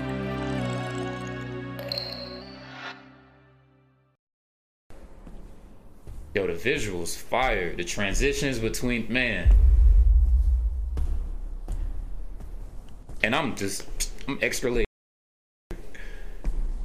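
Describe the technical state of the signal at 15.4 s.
Audio dropout to silence, 14.85–15.71 s: the input was likely lost while recording continued, leaving 0.86 s of dead digital silence without room tone.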